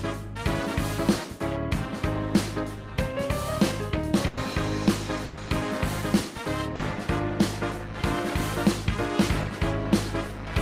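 At 4.27 to 4.39 s and again at 5.25 to 5.39 s, the last sound is held and fades away, and then the audio picks up slightly further on. Each is a burst of packet loss. A run of packets arrived too late or not at all, and the receiver stretched the last sound while lowering its level, covering about 100 ms in the first gap and 120 ms in the second. That much of the original audio never plays.

At 6.75 to 6.81 s a brief smear or wobble passes quickly. This is short concealed packet loss. About 40 ms failed to reach the decoder in time, so the receiver continued the preceding sound to fill the hole, then blended back into the real signal. Whatever fell inside that gap is missing.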